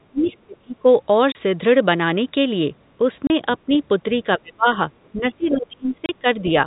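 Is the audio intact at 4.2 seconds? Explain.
No. From 4.12 to 4.67 s the speech is caught by speech suppressed in double talk. The level dips unevenly, by around 30 dB at its deepest, affecting roughly 0.4 s in total. The likely cause is an echo canceller that cannot separate this talker from loudspeaker echo while the far side speaks, so it turns both down. Packet loss gives abrupt silences or repeated fragments. This is instead a ragged gain duck that follows the overlap.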